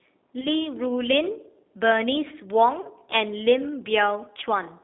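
Throughout, the speech carries the sound of the G.729 codec. The audio is squeezed into a band from about 250 Hz to 3.7 kHz, so it sounds thin and boxy. At 8 kbit/s, the codec rebuilds each short frame from a vocal tract filter, a pitch predictor and a few pulses. The damage is plainly audible. The voice comes across rough and slightly synthetic.

From 0.41 to 0.47 s comes VoIP packet loss concealed by the speech codec. The decoder lost data and filled the gap by repeating its last pitch and filter at falling gain. The result is a brief smear. Its length fits a single lost 10 ms frame. A longer dropout follows from 2.81 to 2.88 s, consistent with about 30 ms of lost frames. Here the sound is stretched and fades, and it stays weak and distorted until the decoder recovers.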